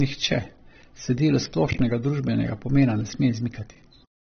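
From start to finish the speech has nothing above about 6.3 kHz, so it sounds dull and boxy, with the smeared, swirly texture of heavy data reduction. This is likely low-bitrate audio saved at a high bitrate: the band limit and artefacts point to an earlier low-rate encode, perhaps around 24 kbit/s AAC, later re-saved as a roughly 200 kbit/s MP3. The larger file cannot restore what that first pass discarded.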